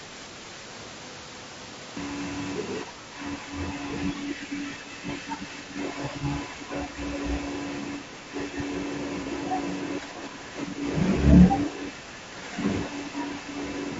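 Speech clip, likely passed through AAC-ELD, the low-delay AAC used in video calls, at a rate that fits about 32 kbps. Its short frames resolve the voice's harmonics poorly, so the damage is plainly audible throughout: a rough, grainy texture with noise filling the gaps between harmonics and a thin, synthetic-sounding top band. It has a cut-off start because the recording began late. The audio sits in digital silence until 1.97 s and then cuts straight into the middle of a sound, with no natural attack or fade-in. The echo canceller was likely confused by both sides talking at once, producing speech suppressed in double talk. It pulled this talker down along with the loudspeaker echo, so the voice dips by up to roughly 10 dB, dulls or breaks up during 2.83–3.53 s, 4.13–6.98 s, 7.98–8.56 s, 10.01–10.82 s and 11.7–13.54 s. Two bouts of AAC frame loss with concealment, each fitting a single lost frame of about 30 ms, occur at 6.20–6.24 s and 9.23–9.27 s. 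The decoder rebuilt the gap from the last good spectrum, leaving a brief smeared, noisy patch in the voice.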